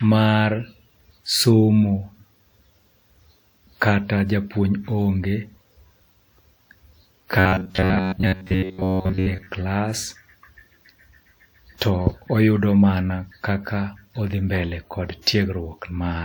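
From 7.39 s to 9.48 s the speech turns into robotic sound from repeated short buffers: a rigid, metallic buzz at about 94 Hz that only loosely follows the original. The likely cause is audio arriving too slowly, so a segment of roughly 10.7 ms is replayed to fill the gaps. Most of that stretch is repeated material. On a spectrogram this shows as flat, evenly spaced harmonics at 94 Hz multiples; the waveform shows identical cycles recurring.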